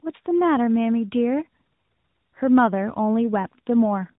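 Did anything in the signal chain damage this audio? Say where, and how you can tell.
Yes, at the codec stage: tandem speech coding across the whole clip. The speech is rough, muffled and warbly, with nothing above 3.8 kHz. It sounds like successive decode and re-encode steps, ending in an AMR-NB coder that is re-quantising already degraded speech.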